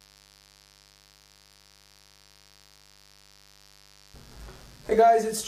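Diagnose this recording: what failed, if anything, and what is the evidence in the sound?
Interference in the analogue wiring let 50 Hz switching spikes in, causing mains buzz: a steady, raspy hum with kilohertz harmonics, well below the programme, throughout.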